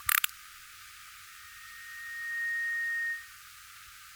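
At 1.28 s a loudspeaker feedback squeal begins. A microphone is picking up the loudspeaker it feeds. At 1.8 kHz the loop gain rises above one, so that frequency keeps amplifying itself. It starts as a thin, steady tone. Over about a second it swells into a piercing squeal. At its peak it sits roughly 5 dB above the rest of the sound. The squeal stops at 3.42 s.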